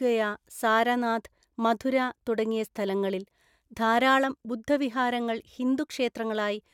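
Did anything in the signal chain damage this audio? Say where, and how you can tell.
No, no signal-chain damage audible.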